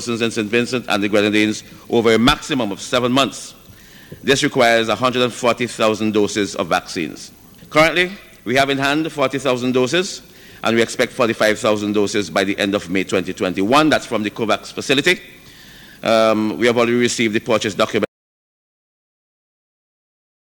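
At 18.05 s the sound stops abruptly and the remaining 2.4 s to the end are silent: an audio dropout to silence. The likely cause is that the input was lost, through a disconnected device, a broken link or a mute, while recording carried on writing silence. Unlike a fade-out, a pause or a noise gate closing, there is no decay and no faint room tone or hiss underneath. The background vanishes along with the signal.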